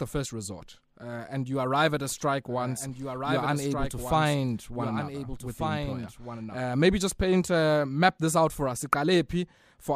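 From 2.09 s, right after "you arrive at a", until 6.57 s, before "maybe just paint uh", a doubled audio track is heard: a dry, somewhat quieter copy trails about one and a half seconds behind, cutting in and out abruptly, likely from a second, slower capture path.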